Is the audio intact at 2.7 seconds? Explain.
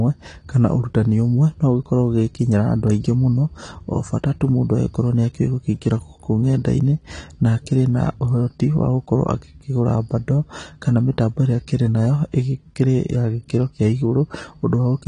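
No, at 2.7 seconds the speech is dull and smeared like the rest of the clip, with nothing above 10.1 kHz and a fizzy, warbly edge on sibilants. That's likely AAC compression, where the encoder drops the top band and coarsely quantises the rest, which fits a low bitrate around 32 kbps.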